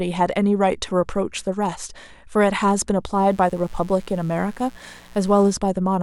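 Mains buzz enters from 3.15 to 5.56 s: switching spikes twice per 60 Hz cycle spray harmonics into kilohertz territory, giving a steady, raspy buzz well below the speech.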